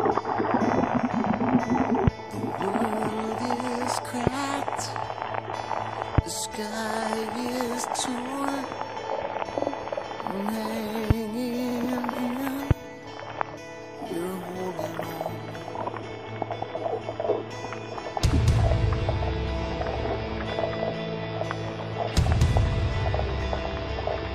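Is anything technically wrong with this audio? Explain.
Yes. Repeated frames occur at 9.59 s and 11.71 s. A short run of compressed frames was delivered more than once, so the decoder replays the same slice. At 9.59 s a block of about 46 ms (consistent with two frames) plays twice extra, adding 93 ms. At 11.71 s a 70 ms block repeats once. Each is heard as a brief stutter.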